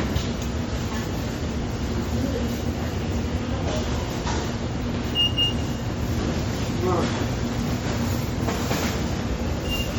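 From start to finish the whole clip has a watery, swirly quality, with sharp attacks blurred rather than crisp. That's likely MP3 compression, and heavy enough to fit a low bitrate around 48 kbps. Starved of bits, the encoder drops quieter frequency detail that flickers in and out from frame to frame, which gives the damage its plainly audible, bubbling texture.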